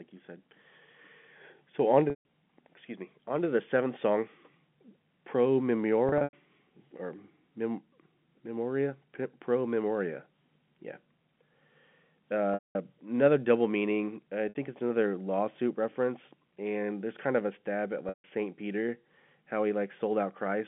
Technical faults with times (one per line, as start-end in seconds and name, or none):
2.10-2.23 packet loss with pitch repetition
6.09-6.33 packet loss with pitch repetition
12.54-12.75 packet loss with pitch repetition
14.49-14.55 packet loss with pitch repetition
18.09-18.24 packet loss with pitch repetition